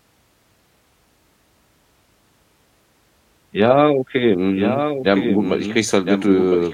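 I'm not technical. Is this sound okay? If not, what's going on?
No. From about 4.54 s to the end, the speech plays twice: a second copy, a little quieter than the original, follows about a second behind. This is a doubled audio track, most likely from the same sound being recorded again through a slower path. Unlike a room echo, the copy doesn't fade away or sound roomy; it is just as clear as the original, and it cuts in suddenly rather than building up.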